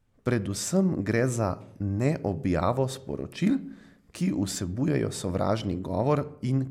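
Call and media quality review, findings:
No audible defects found in the speech; nothing to log against any component.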